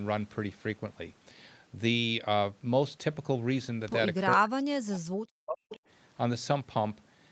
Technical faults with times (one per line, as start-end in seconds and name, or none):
4.31-4.36 echo leak
4.36-5.79 speech suppressed in double talk
5.70-5.77 echo leak